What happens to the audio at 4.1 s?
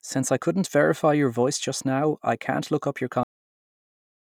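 A cut-off end runs from 3.23 s to 4.25 s. Just after "can't look up your", the final buffers were never written, so the speech stops mid-sound and falls into digital silence with no decay.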